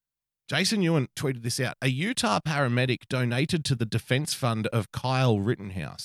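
No technical fault can be heard anywhere in the speech recording; the signal stays continuous and stable throughout.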